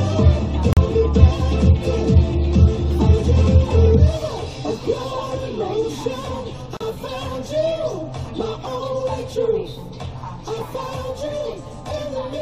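At 0.73 and 6.77 s, a gap at a join of encoded pieces leaves silences of about 40 and 37 ms, six seconds apart: blank vertical strips with smeared edges.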